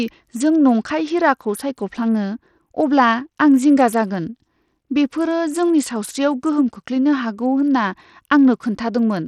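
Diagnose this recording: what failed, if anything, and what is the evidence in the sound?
Codec stage, throughout the speech: the treble flickers in and out, and a gritty, aliased noise rides on the sound. The likely cause is Bluetooth SBC compression with a small bit pool, which fits about 80 kbps. The upper sub-bands get few bits, and the rest are coarsely quantised.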